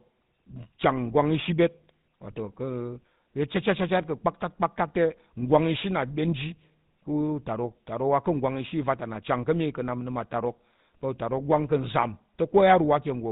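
From start to end, the speech carries GSM full-rate codec damage. Nothing above 4 kHz survives. Pulse-driven excitation leaves a plainly buzzy, gravelly roughness, consistent with a 13 kbps stream.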